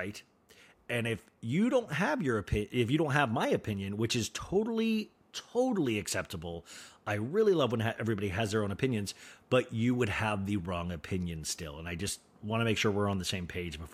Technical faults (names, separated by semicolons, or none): none